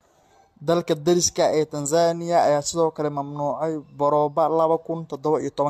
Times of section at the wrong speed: none

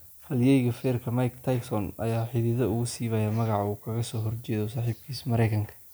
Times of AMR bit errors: none

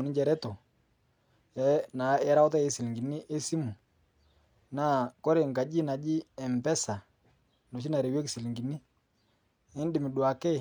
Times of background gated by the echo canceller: none

